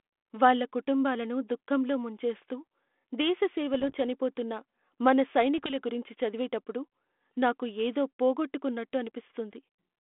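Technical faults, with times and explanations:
3.74–4.00 s and 5.58–5.75 s, bit errors on an ADPCM link: you get pops and short rough bursts with the level jumping about. A fraction of a percent of bits flipped, and each one knocks the decoder's step size and predictor off, so the damage rings on briefly. The 32 kbit/s G.726 line underneath stays band-limited to roughly 250 Hz–3.5 kHz.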